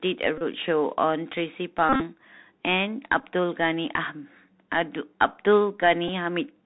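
Throughout, the speech has the narrowband sound of the Bluetooth CVSD headset codec: nothing above 4 kHz, scratchy s sounds and a granular hiss. The hiss tracks the signal's slope rather than sitting as a steady noise floor.

At 0.38 to 0.43 s, about 30 ms of audio is lost as a Bluetooth headset packet is repeated, giving a brief buzz near 267 Hz. The pitch stays fixed rather than following the voice. From 1.89 to 2.02 s, losses scattered over about 112 ms, with a longest run of around 40 ms, produce a broken, stuttering buzz at that same pitch. At 3.20 s and again at 6.08 s, short runs of three repeated packets, about 11 ms each, leave very brief buzzes.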